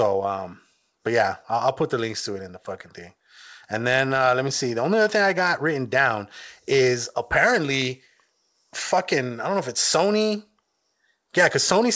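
No technical faults are audible.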